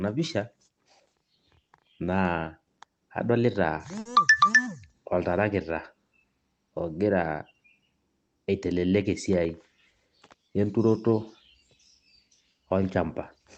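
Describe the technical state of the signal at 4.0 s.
At 4.0 s there is a short stall from a late packet, running from 3.99 to 4.07 s. A packet missed its playout time and the jitter buffer ran dry. The receiver held the last sound for about 60 ms until the packet turned up, then resumed where it left off. Nothing is lost, but playback now runs 60 ms later. You hear a speech sound drawn out too long, with a slight buzz or dip, over the call codec's band-limited sound topping out near 8 kHz.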